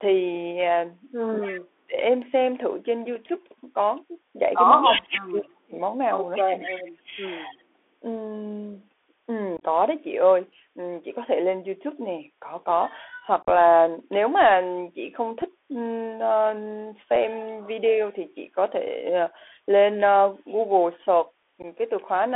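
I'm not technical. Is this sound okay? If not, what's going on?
No. This is speech carried over a Bluetooth CVSD headset codec, the basic link many headsets use for calls, for the whole clip. It passes only a narrow band, roughly 300 Hz to 3.5 kHz, so the voice sounds thin and muffled. The codec tracks the sound with tiny up-or-down steps. Quick, loud, bright sounds outrun those steps, which leaves s sounds scratchy and a grainy hiss underneath.

Speech suppressed in double talk happens from 1.4 to 1.96 s, 4.86 to 5.76 s, 6.42 to 6.85 s, 7.03 to 7.23 s and 7.5 to 7.56 s. The voice suddenly drops away or fades sharply for a moment. It is strongest in the first two spots and gentler later. This is likely the call's echo-cancelling system getting confused while both sides spoke at once and turning the talker down along with the echo.

An echo leak appears from 1.42 to 1.6 s, 4.81 to 5.2 s and 6.36 to 6.91 s. 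A repeat of the voice arrives about a quarter of a second late. Around 5 s it is nearly as loud as the speech itself. The likely cause is that someone was on a loudspeaker and their phone's echo removal let some of the sound picked up by its microphone slip back into the call.

Unconcealed Bluetooth headset packet loss causes short holes with abrupt edges. They come at 9.57 to 9.64 s, 13.43 to 13.5 s, 15.42 s, 17.16 s and 21.62 to 21.65 s. Tiny chunks of audio between the headset and the phone went missing, and nothing filled the gaps. The longer ones, near 9.6 and 13.5 s, are made of several scattered dropouts, so the voice sounds briefly crackly and chopped.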